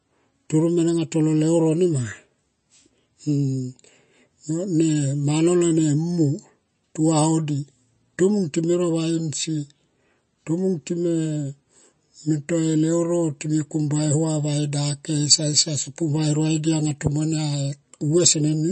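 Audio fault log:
throughout, MP3 compression: nothing above 8.3 kHz and a watery, swirly edge on the speech, likely a low-bitrate MP3 starving the treble and weak detail.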